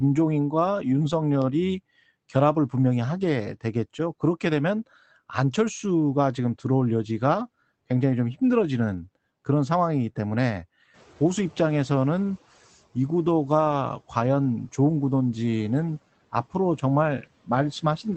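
At about 10.93 s the room noise jumps by roughly 17 dB, and the noise suppressor is caught out. For the next 1.45 s, until 12.38 s, the new noise comes through with too little reduction, then sinks by about 9 dB as the suppressor's noise estimate catches up. This is noise suppressor catching up, not a change in the room: the noise level itself stays steady after the jump, but what passes through fades gradually rather than stepping.

From 13.67 to 13.73 s there is a brief patch of rougher, grainier sound, with no silence or click. This is a lost packet rebuilt from error correction. The Opus decoder replaced about 40 ms of lost audio, which fits two 20 ms frames, with the low-bitrate copies carried in the following packets. Concealment would instead smear or stretch the preceding sound, and a plain dropout would leave a gap. Here the sound continues, only coarser.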